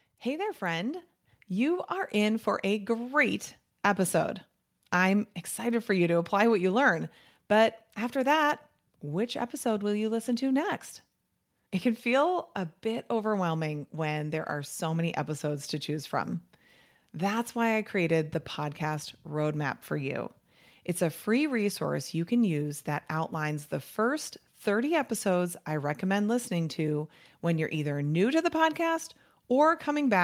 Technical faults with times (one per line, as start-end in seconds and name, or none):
1.02 microphone volume stepped up